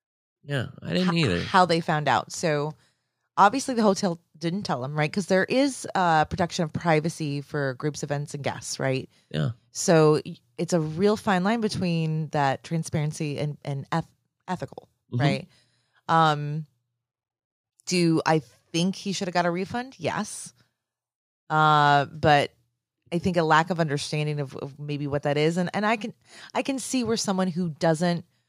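Nothing in this speech recording stands out as a technical fault, so there's nothing to point to at any moment along the way.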